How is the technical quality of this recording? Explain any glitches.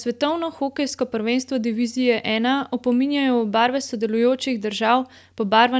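No glitches; the call-processed speech holds steady.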